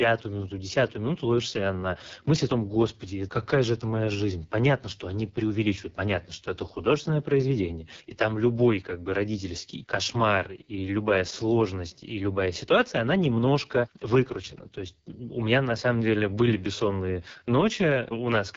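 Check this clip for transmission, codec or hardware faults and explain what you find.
There's one fault, and it runs the whole way through: AMR wideband (HD Voice) codec damage. The speech has a rough, raspy edge that fits the codec's lowest 6.6 kbit/s mode, where the pulse-driven vocal tract model is too coarse to capture the voice cleanly. Nothing is left above about 7.4 kHz, and the top band is filled with shaped noise instead of real detail.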